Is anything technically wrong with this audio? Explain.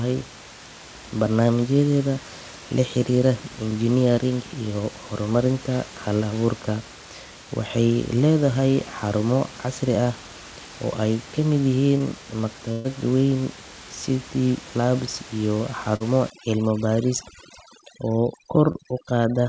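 Yes. Short concealed packet loss occurs at 11.98 to 12.02 s just after "ay ka mid", at 15.96 to 16.02 s after "labs iyo", and at 18.72 to 18.76 s. The receiver patched 20 to 40 ms gaps by extending the preceding sound, leaving brief smears that appear as smoothed, repeated-looking spectrogram slivers.

A burst of packet loss runs from 12.72 to 12.86 s. About 120 ms of speech is missing and is replaced by a decaying continuation, heard as a held buzz or fading hiss and visible as a tapering, striated block before speech resumes.

Overdone noise removal affects 16.3 s to the end. Aggressive spectral gating leaves twinkling specks in near-silence. On a spectrogram the background shows as scattered isolated dots and the speech edges look ragged.

The G.722 call path, with nothing above 8 kHz, and room noise about 18 dB below the speech are not faults.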